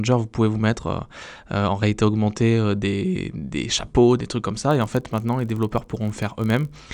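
At about 4.69 s the speech picks up a block size mismatch (padded) that lasts until roughly 6.81 s. One stage is handing over slightly shorter blocks than the next stage reads, so the leftover at the end of each block gets zero-filled. Those tiny silent gaps repeat at 46.9 Hz, which you hear as a low buzz under the speech, and that rate fits a 1024-sample read block. The gaps are so short that the timing barely stretches, running at about 0.999 of normal speed.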